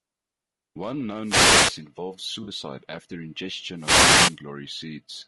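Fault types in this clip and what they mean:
Low-delay AAC compression: The speech has a rough, grainy texture throughout, with noise filling the gaps between harmonics and a thin, somewhat artificial top end. This is likely AAC-ELD coding, the low-delay variant used for calls, whose short frames resolve pitch structure poorly and spend bits inefficiently. The damage is plainly audible for the whole clip and is consistent with a low bitrate of around 32 kbps.
Wireless microphone noise hit: Two bursts of static and swish break through the speech, from 1.21 to 1.81 s and from 3.75 to 4.40 s, each lasting about 0.6 s. They come from an analogue FM radio link fading as reflected signals cancel at the receiver. As signal strength drops, receiver noise rises over the speech and partly masks it, then recedes when the signal recovers.
AAC frame loss with concealment: Two dropouts of about 40 ms occur, at 2.43 to 2.49 s and at 4.23 to 4.29 s. 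During each, coded audio failed to arrive and the decoder filled the gap by reusing the last good spectrum, producing a short smeared, noisy patch rather than silence. The second loss falls inside the second static burst.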